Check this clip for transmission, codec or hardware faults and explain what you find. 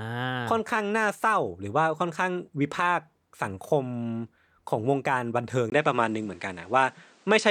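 One fault turns up. From 5.70 s to the end, the input was likely switched to a poorer device with a narrower pickup. After a 20 ms gap, the speech loses everything above 9.8 kHz, shifts in level by about 5 dB, and carries a faint new background noise.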